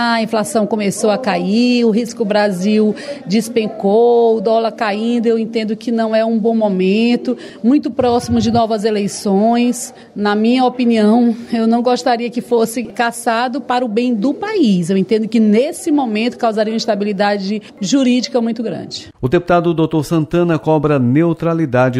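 No technical faults can be heard anywhere in this clip.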